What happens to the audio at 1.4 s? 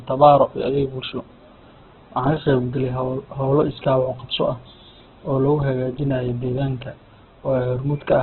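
At 1.4 s the speech carries the same Opus compression damage heard through the whole clip, most likely from a very low bitrate, something near 8 kbps. Nothing reaches above 4.2 kHz, so the speech sounds narrowband and dull. Because the encoder keeps each band's energy and fills thin bands with folded or noisy content, the sound turns rough and grainy rather than developing the swirling, watery holes that would point to MP3.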